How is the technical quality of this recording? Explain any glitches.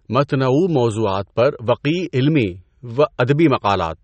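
The technical quality is poor: compression damage is plainly audible from start to finish. Throughout the recording, the speech has a thin, smeared character, with nothing above 8.4 kHz and a watery instability in the upper range. This is likely MP3 compression at a low bitrate, around 37 kbps. Short of bits, the encoder has cut the treble at a fixed point and dropped weaker frequency components that flicker from frame to frame, causing the swirl and dulled edges.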